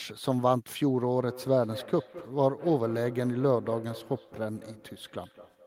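Feedback echo between two devices starts at 1.18 s and runs to the end of the clip. A second device in the same room appears to be playing this speech back, and its sound reaches the first microphone again. Each device's echo canceller removes only what that device plays, so the loop goes unchecked. Every word returns about a fifth of a second later, thinner and ringing, and at its loudest it sits about 17 dB below the speech.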